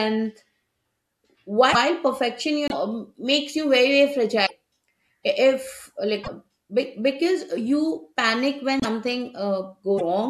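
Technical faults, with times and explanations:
1.72–1.76, 2.68–2.73, 4.45–4.51, 6.23–6.28, 8.80–8.85 and 9.97–10.01 s, broken MP3 bit reservoir: the speech skips ahead with a 40 to 54 ms chirp, noise burst or short gap each time, about two 24 ms frames, likely from dropped frames leaving the next ones pulling reservoir bytes that belong elsewhere.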